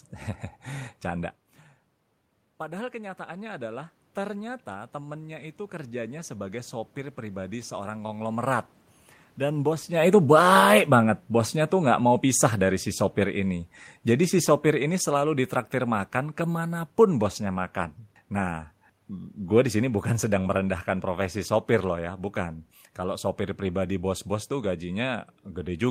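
Around 1 s the talker moves and the input level drops by about 15 dB. From 2.59 to 8.24 s the automatic gain rising compensates, lifting gain by about 11 dB. Voice and room noise swell together, recovering only part of the lost level.

Around the time the talker moves again near 10 s, the automatic gain falling sets in from 9.39 to 13.55 s. The control judged the input too loud, or its background too strong for the current gain, and cut gain by about 6 dB, so speech and background sink together.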